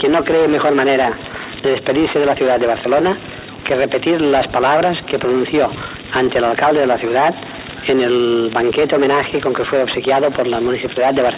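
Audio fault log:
No audible faults detected.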